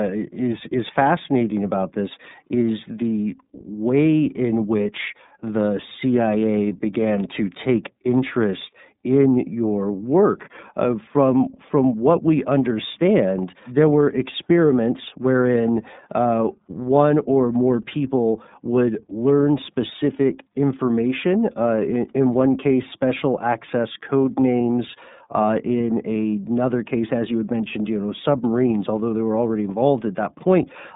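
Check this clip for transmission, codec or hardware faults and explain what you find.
There's one fault, running the whole way through: iLBC codec. Each 30 ms frame is coded independently and nothing passes above 3.8 kHz, so the speech sounds plainly rough, synthetic and narrowband throughout.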